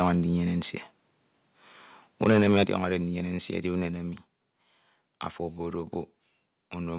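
Right at the start, from 0 to 0.08 s, the peaks come out flat-topped with a brief crackly edge. That's likely microphone overload: the input was running about 4 dB too hot, so the converter shaved off the tops of a small share of the waveform. It happens again and worse from 2.23 to 2.76 s, where the level sits about 10 dB past the limit. You get a harsher, gritty rasp on the loudest syllables, and a few percent of the samples are squared off.

Partway through that second burst, at 2.64 s, the level suddenly drops by about 7 dB, voice and background together. That's the microphone volume stepped down, with the call software likely reacting to the clipping by pulling the device's input gain back in one move. A smaller step of about 2 dB follows at 3.87 s. It's a quieter dip, but it's still an abrupt change rather than a smooth fade. All of this comes through a call path with nothing above 4 kHz, which fits a narrowband G.711-style codec.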